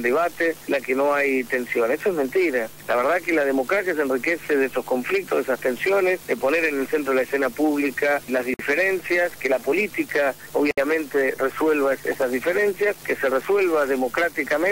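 A gap at a join of encoded pieces opens at 8.54 s and again at 10.71 s, lasting about 54 ms and 66 ms. The audio was evidently encoded in separate sections and spliced without trimming, so each join keeps the encoder's start-up delay and the padding of the previous section's last frame. The continuous sound drops into brief silence with smeared edges, then resumes exactly where it stopped.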